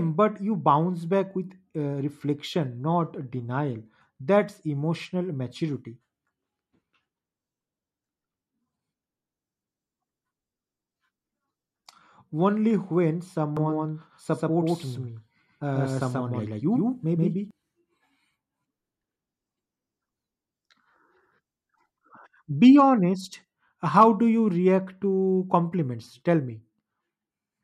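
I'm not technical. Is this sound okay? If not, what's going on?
No. From 13.57 to 17.51 s, just after "only when", there is a doubled audio track, likely from the sound being recorded twice through a slower second path. A second copy, just as loud, trails about a sixth of a second behind, so everything sounds echoed, then stops abruptly.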